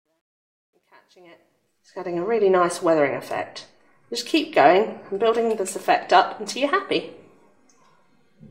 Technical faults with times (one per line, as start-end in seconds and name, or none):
0.00-2.23 truncation distortion on a fade